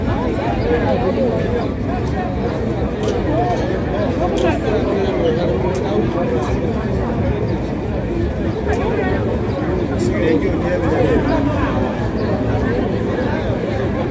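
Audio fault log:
No faults heard anywhere in this recording.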